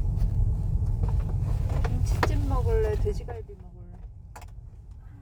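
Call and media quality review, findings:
Zipper noise, 3.12–3.52 s: rapid ticking riding a level drop of roughly 15 dB, in 1 dB steps about 40 per second. Unsmoothed gain stage. Waveform shows staircase envelope; spectrogram shows evenly spaced thin vertical broadband lines.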